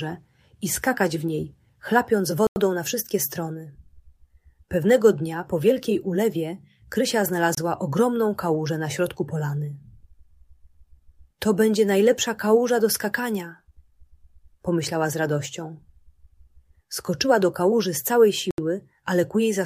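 Three brief dropouts to silence interrupt the audio: at 2.47 s for about 93 ms, at 7.55 s for 27 ms, and at 18.51 s for 74 ms. These are most likely Bluetooth stalls, where radio interference delayed packets until the headphones' buffer emptied. On a waveform each shows as a flat gap; on a spectrogram, a clean vertical blank band across all frequencies.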